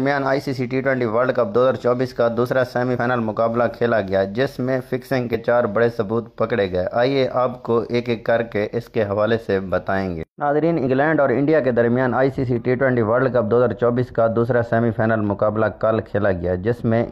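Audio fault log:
2.93–2.98 s, 5.30–5.35 s and 10.82–10.88 s: damaged data in a compressed stream. Each is a short blip, about 50 ms, where corrupted frames throw the decoder out of sync until it finds the next header.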